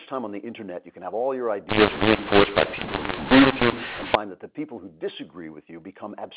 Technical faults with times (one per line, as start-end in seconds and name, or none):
1.69-4.15 mu-law and A-law mixed up